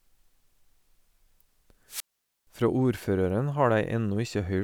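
At 1.87 s the radio link of the analogue FM wireless microphone weakens until the receiver's squelch gate decides there is no usable carrier and shuts its output off. The result is a wireless microphone squelch dropout: a short lift in hiss as the signal fades, then a hole of near silence lasting about 469 ms where the speech simply vanishes, before the receiver reopens and the speech comes back at 2.47 s.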